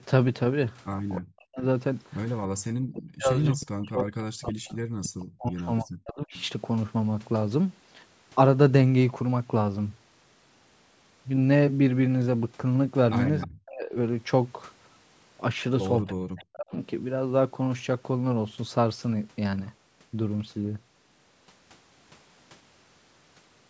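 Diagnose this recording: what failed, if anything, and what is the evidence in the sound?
Call processing is where this went wrong, with speech suppressed in double talk. Around 1.2–1.63 s, 2.79–6.34 s, 13.45–13.95 s and 16.03–16.73 s the voice sinks by up to about 40 dB or drops out in pieces, likely the echo canceller ducking both talkers at once.

There's also echo leak, again in call processing: faint delayed copies of the voice at 3.6–3.66 s, 5.03–5.1 s, 6.35–6.46 s and 13.41–13.47 s, 317 ms late and about 15 to 25 dB down. That's likely loudspeaker pickup the far end's canceller missed.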